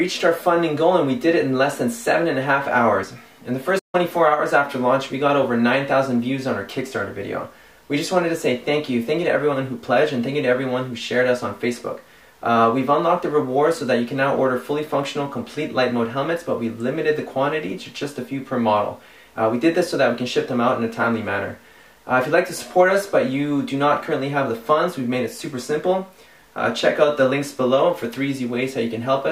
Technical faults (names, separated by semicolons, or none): playback stall